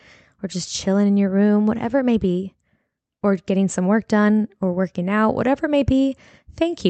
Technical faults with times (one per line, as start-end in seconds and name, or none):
none